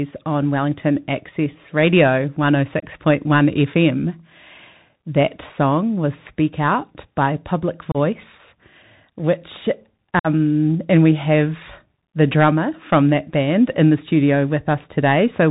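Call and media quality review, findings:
Bluetooth CVSD headset codec, whole clip: speech band-limited at 4 kHz, s sounds scratchy, granular hiss under the speech, distortion on loud bright syllables. The slope-tracking delta coder's step can't keep up. Unlike ordinary low-pass or 8 kHz resampling, the hiss and overload grit set it apart, consistent with a 64 kbps CVSD link.

Unconcealed Bluetooth headset packet loss, at 2.80 s (22.5 ms), 7.92 s (30 ms) and 10.19 to 10.27 s (52.5 ms): abrupt holes with hard edges, then speech resumes briefly quieter as the CVSD step size rebuilds. Lengths fit roughly three, four and seven lost packets. No smoothing fill, unlike concealed loss or a network jitter-buffer gap.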